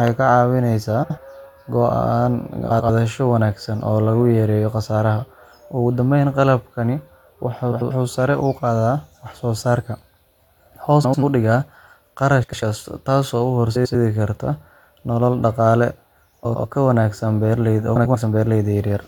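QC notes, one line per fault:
1.03–1.18 s, 2.70–2.90 s, 7.72–7.91 s, 11.03–11.23 s, 12.43–12.62 s, 13.75–13.95 s, 16.45–16.65 s, 17.96–18.16 s: frames out of order. Two adjacent 93 ms blocks (70 ms at 1.03 s) play swapped, giving a garbled flutter and no lost time. Spectrogram and waveform show abrupt vertical breaks at the three seams.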